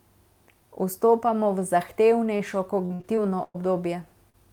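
Short concealed packet loss at 2.37 to 2.41 s: about 20 ms of speech arrived too late, so the decoder extended the preceding sound and blended back, leaving a brief smear.

Repeated packet loss (robotic sound) from 2.85 to 3.57 s: five separate gaps, the longest 110 ms, each patched by continuing the last sound. About a third of the stretch is concealed, so the speech turns choppy.

Short concealed packet loss again at 4.30 to 4.35 s: roughly 40 ms went missing and was filled in the same way, producing a short wobble.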